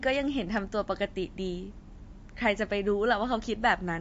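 Throughout the speech, nothing is present above 7.6 kHz, and the remaining sound has a plainly audible watery, swirling quality, with smeared consonant onsets and brittle s sounds. This is likely MP3 compression, with a treble cut and fluctuating weak components that fit a low bitrate of around 44 kbps.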